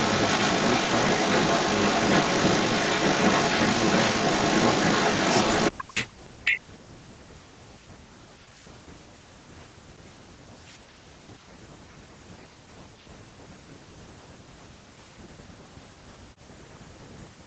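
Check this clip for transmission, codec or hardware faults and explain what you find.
Two kinds of fault turn up: an echo leak, then repeated speech suppression during double talk.

Echo leak, 0.0 to 5.84 s and again 6.44 to 6.61 s: a delayed copy of the speech trails it by about 381 ms, then 393 ms. The far end was likely on a loudspeaker, and its echo canceller let some of the pickup through and back.

Speech suppressed in double talk, at 5.72 to 7.84 s, 8.24 to 8.59 s, 8.78 to 11.18 s, 11.69 to 15.86 s and 16.14 to 17.46 s: the speech dips hard, as much as around 40 dB. Both sides were talking at once, and the echo canceller likely couldn't separate the near talker from the echo, so it turned everything down.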